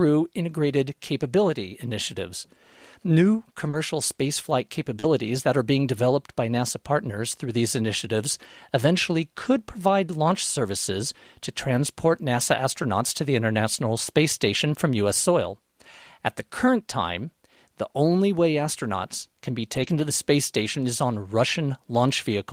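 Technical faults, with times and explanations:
3.69–3.75 s and 4.99–5.05 s, short concealed packet loss: about 40 ms went missing each time, and the decoder stretched the preceding sound over the hole. This gives a brief smear just before "that are being developed".
3.73 s and 5.03 s, lost packet rebuilt from error correction: the last 20 ms of each gap came from a low-bitrate backup copy carried in the next packet, so it sounds rougher and noisier.
19.75–20.05 s, lost packet rebuilt from error correction: between "way astronauts can be" and "the space station is", scattered losses totalling about 160 ms were replayed from backup copies. There's no gap, but the texture turns grainier and noisier.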